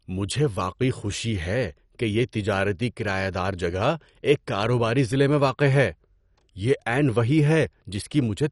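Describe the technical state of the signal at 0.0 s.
At 0.0 s the speech already sounds dull and gurgling, with a granular, watery roughness that runs through the whole clip. Nothing is heard above about 11.3 kHz. This is likely MP2 compression at a low rate, consistent with around 48 kbps. MPEG Layer II divides the signal into 32 sub-bands and shares out bits among them. When bits run short, the upper bands are dropped and the remaining bands are coarsely quantised, leaving plainly audible codec damage.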